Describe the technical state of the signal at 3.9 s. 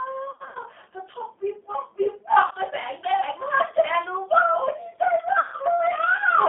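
At 3.9 s the speech carries G.729 codec damage, present throughout. A low-rate model resynthesises it within 200 Hz to 3.4 kHz, fitting an 8 kbit/s coder, sounding rough and synthetic.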